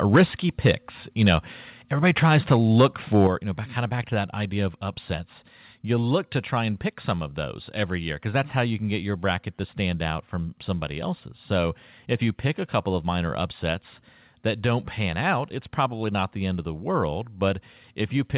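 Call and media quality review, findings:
Microphone overload, 0.13–0.23 s, 0.65–0.71 s, 1.21–1.34 s, 2.05–2.86 s, 3.14–3.27 s (just before "you know back kind"). Harsh crackle on loudest speech peaks, first burst worst. Likely capture gain too high. Peaks driven about 6 dB past converter full scale at start, about 4 dB afterwards. Tops flattened. Clipped share roughly a tenth of samples early, a few percent later.

Microphone volume stepped down, 0.16 s (about 2 dB), 3.27 s (about 7 dB, before "you know back kind"), 17.49 s (about 1 dB, after "end of the world"). Sudden level drop, speech and background together. Likely client auto-gain reacting to clipping by cutting device input in single steps. Largest step follows the last overload. Distortion absent after 3.27 s. Call path band-limited, nothing above 4 kHz, consistent with 64 kbps G.711 mu-law.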